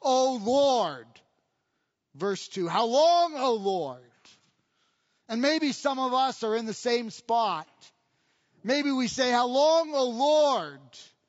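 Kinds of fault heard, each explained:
Low-delay AAC compression: The speech carries plainly audible coding damage throughout, likely from AAC-ELD, the low-delay AAC used for calls. Its very short frames resolve pitch harmonics coarsely and spend bits fast. The damage level fits a rate near 32 kbps.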